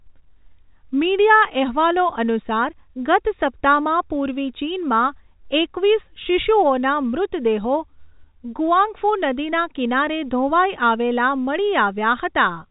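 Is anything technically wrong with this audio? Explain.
No, nothing is technically wrong with this audio.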